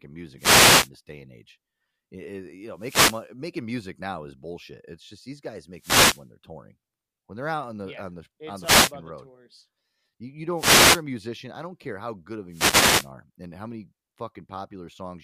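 Six wireless microphone noise hits break into the speech, at 0.37–0.90, 2.74–3.27 (just before "making music now is"), 5.74–6.26, 8.61–8.93, 10.55–11.03 and 12.49–13.10 s. Each time the FM link fades, receiver hiss swells and swishes over the voice for about 0.3 to 0.6 s.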